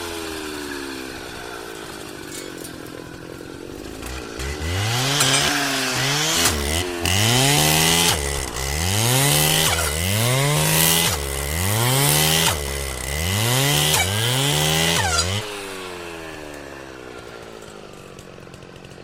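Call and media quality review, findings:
No technical faults found in the audio; the signal path shows no defects to log against any component.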